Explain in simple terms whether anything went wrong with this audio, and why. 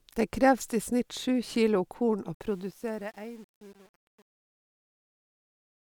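Truncation distortion on a fade runs from 2.34 s to the end of this speech clip, worst from 2.6 s onward. The fade-out that starts around 2.3 seconds should just get quieter, but the volume stage keeps too few steps of loudness, which fits an 8-bit stage with no added noise to smooth it. As the level sinks, the sound becomes rough and grainy instead of fading away cleanly.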